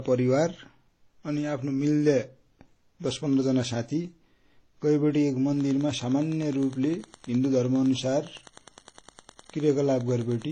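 From the very start the speech has a smeared, doubled-up graininess, and nothing comes through above 14.8 kHz. That mix of two different flavours of artefact is most likely transcoding between lossy codecs: it fits a WMA encode at about 32 kbit/s that was then re-encoded to HE-AAC at a similar rate. The second encoder spent its bits on the first one's mess and added its own on top, and the lower cut-off stayed.

At 5.53 s a Wi-Fi interference problem kicks in and runs to the end of the clip. You get a steady tick repeating every 102.4 ms, roughly ten a second, plus scratchy rasps between the ticks when there's data traffic. It sits well under the speech, around 30 dB down. A nearby Wi-Fi radio's beacon and data bursts are being picked up and rectified by the audio circuitry.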